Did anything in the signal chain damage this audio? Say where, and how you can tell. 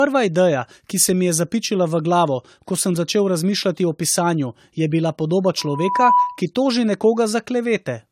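Yes. Codec stage: smeared, swirly, hollow speech throughout, with a spectrogram cutoff at 16.2 kHz and blotchy holes; likely generation loss from several successive AAC encodes.

Playback-to-microphone loop: from 5.58 to 6.42 s, a loudspeaker feedback squeal at 985 Hz swells over about half a second, visible as a bright horizontal line, about 5 dB above the speech.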